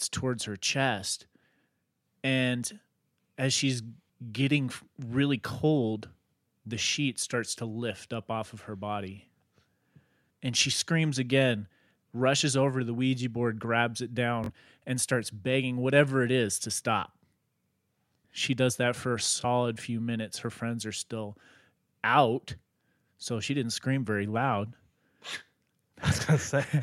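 Bluetooth stutter twice: audio packets failed to arrive in time, so the receiver replayed its last short buffer until fresh data came. At 14.44 to 14.50 s, after "board grabs it", a roughly 43 ms gap fills with a brief machine-gun repeat before "and starts begging whatever" resumes, which fits two lost frames. At 19.41 to 19.45 s, between "does that for a" and "few minutes", a single slice of about 21 ms repeats.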